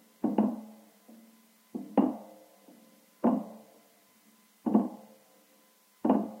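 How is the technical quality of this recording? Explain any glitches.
No glitches or technical faults are audible anywhere in the recording.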